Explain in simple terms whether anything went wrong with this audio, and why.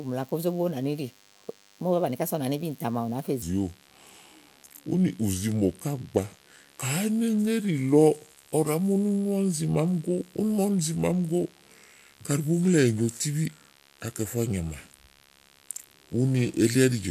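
DECT cordless phone buzz runs through the whole recording. A cordless phone or its base station close by sends a tiny radio pulse every 10 ms, and the recording electronics pick it up and turn it into sound. The result is a thin, steady buzz at 100 Hz with a raspy edge from its many overtones. It sits well below the speech but stays audible in the background from start to finish.

A section at the wrong speed begins at 3.42 s and lasts to the end. From that point the speech plays at about 0.7 times its proper speed, so it drags and drops roughly seven semitones in pitch, sounding deep and sluggish. Speed and pitch shift together because the audio is being stretched out in time. The likely cause is a player or editing tool that handled that part using the wrong clock.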